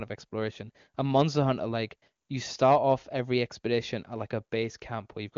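No technical faults are audible.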